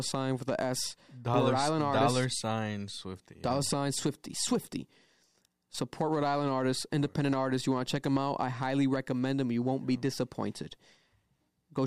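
No technical faults are audible anywhere in the recording.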